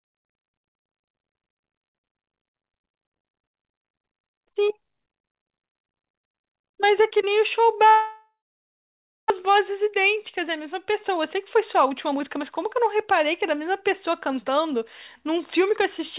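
A long network dropout runs from 7.88 to 9.32 s. The audio stops being real sound and becomes a fading buzz that decays into silence for roughly 0.92 s. About 1 s of the original is missing when the audio resumes. The likely cause is a gap in packet arrival, with the receiver concealing the loss by stretching the last sound before giving up. The whole stretch is heard through a narrowband path with nothing above 4 kHz.

A jitter buffer speed-up follows from 9.40 to 14.82 s. The audio plays about 6% fast at unchanged pitch, sounding slightly hurried. This happens because, after the delay grew by around 0.4 s, the buffer trimmed short pitch-period pieces repeatedly, shedding roughly 0.3 s in total. A milder speed-up, about 4% fast, recurs from 15.22 s to the end at 16.18 s. It removes only around 40 ms.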